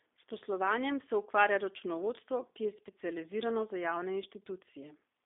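From start to finish the speech carries G.729 codec damage, plainly audible and consistent with an 8 kbit/s rate. The line band runs roughly 300 Hz to 3.6 kHz, nothing passes above 3.7 kHz, and the rebuilt voice comes across rough and slightly synthetic.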